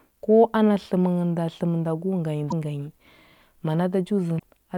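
At 2.47 to 2.53 s and again at 4.35 to 4.43 s the speech is broken by short bursts of damaged data in a compressed stream, lasting about 60 and 80 ms. Corrupted bytes left the decoder unable to read those frames, so it lost sync and had to find the next valid frame header. Each burst is heard as a brief glitch that breaks into the speech.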